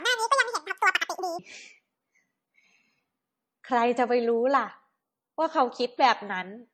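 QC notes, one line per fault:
throughout: transcoding between lossy codecs. The speech carries two layers of coding damage heard together. There is a dull, band-limited top end with swirly, watery smearing on consonants. There is also a thin, slightly metallic sheen over the upper range. The pattern fits an MP3 stage at about 32 kbit/s, likely followed by a re-encode to HE-AAC at about 48 kbit/s. The second encoder spent its bits on the first one's artefacts and added its own. The lower cut-off from the first stage never came back.
0.00 to 1.39 s: section at the wrong speed. The opening plays about 1.87 times too fast. Speech is rushed and chipmunk-like, raised by close to ten semitones. Pitch and tempo shift together, so syllables are both squeezed and raised. At 1.39 s the sound drops to its natural rate and pitch. The likely cause is this stretch being played or edited against the wrong clock, while the rest of the clip ran correctly.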